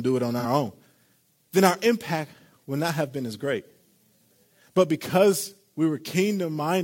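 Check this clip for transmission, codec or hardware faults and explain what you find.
One fault can be heard: AAC frame loss with concealment, from 0.39 to 0.45 s, right after "it on". About 43 ms of audio went missing, which fits a single lost frame. The decoder patched the gap by reusing the last good spectrum with scrambled signs or interpolated energy, so the speech briefly turns smeared and noisy. On a spectrogram the harmonic lines blur into a short, diffuse noise-like block. The waveform loses its regular periodic shape for that stretch.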